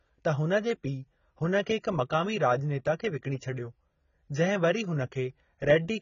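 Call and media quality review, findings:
Dull, smeared speech throughout, nothing above 7.1 kHz, warbly sibilants. Likely AAC compression (AAC-LC) at a starved bitrate, around 16 kbps: encoder drops the top band and coarsely quantises the rest, leaving spectral holes or noise-filled bands and heavy damage.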